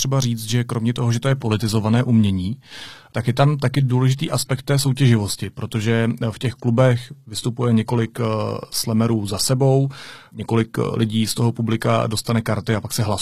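At 0.99 s the adaptive stream dropped to a lower bitrate and stays there to the end. The sound fits a switch from roughly 96 kbit/s AAC to low-rate HE-AAC. With no gap, the speech turns abruptly duller, nothing above 15 kHz, with rising codec artefacts.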